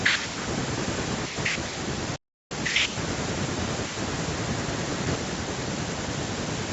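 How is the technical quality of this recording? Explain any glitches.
The recording has one clear glitch, a gap in the speech from 2.16 to 2.52 s, most likely a Bluetooth dropout. For about 350 ms the output goes completely silent. Audio packets most likely failed to reach the headphones in time and were discarded, so nothing played until good packets arrived. The speech then resumes further along, as if it had kept running underneath. On a waveform this shows as a flat line with abrupt or briefly faded edges. On a spectrogram it is a clean vertical blank band cutting across all frequencies, which here stop at 8 kHz because of the call's microphone processing.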